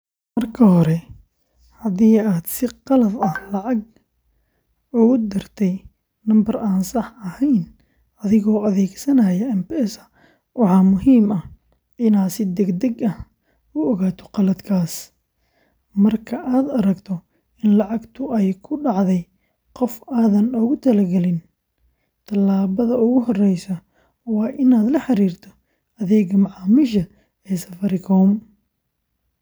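Speech recording with no technical faults to report.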